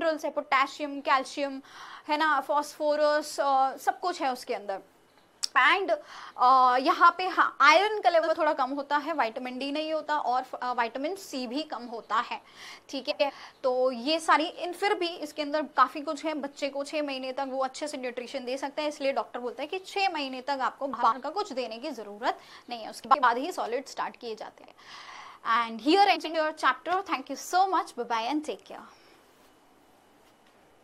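Frames out of order occur at 8.23, 13.10, 20.93, 23.05, 24.63 and 26.15 s. Each time, two neighbouring blocks of 46.4 or 92.9 ms play in swapped order. The sound turns into a brief garbled flutter. No time is lost.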